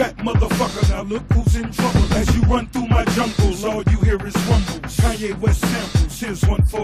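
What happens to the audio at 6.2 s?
Nothing goes wrong at 6.2 s; the audio carries on intact through that moment with no dropout, click or distortion.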